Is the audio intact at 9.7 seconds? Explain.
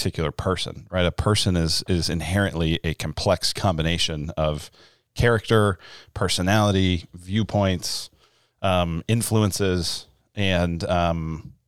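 Yes, the audio is intact at 9.7 seconds, with no audible fault at that moment.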